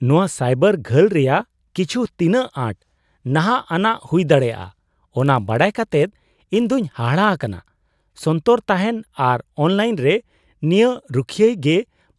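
From 4.4 to 7.96 s the speech carries a resampler restarted on every block: converting 48 kHz to 24 kHz in isolated 20 ms blocks leaves an error at each edge, heard as a 50 Hz buzz under the signal, seen as evenly spaced vertical streaks on a spectrogram.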